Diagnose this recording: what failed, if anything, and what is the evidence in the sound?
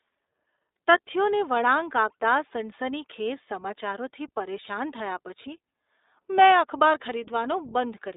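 The fault sits at the codec stage and runs through the whole speech recording. It is iLBC coding, and the damage is plainly audible. The band is squeezed to roughly 300 Hz to 3.7 kHz, so the speech sounds thin and telephone-like. There is a rough, synthetic edge throughout. iLBC codes each frame's excitation on its own, without leaning on the previous frame. The texture points to the 20 ms frame mode at about 15.2 kbps.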